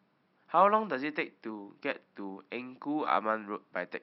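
No technical faults are audible.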